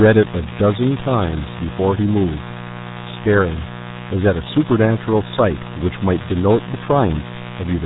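From start to end, a mains buzz sits fairly close beneath the speech. Sharp switching spikes locked to 60 Hz mains add a raspy, edgy texture rather than the smooth, rounded tone of plain hum, because its harmonics climb well into the kilohertz range.

Throughout, the speech also carries RealAudio 14.4 codec damage, and it is heavy. Nothing above 3.8 kHz survives, and the low rate, which fits an 8 kbit/s dial-up codec, leaves it muffled and gargly. That watery, bubbling distortion separates it from a simple low-pass filter.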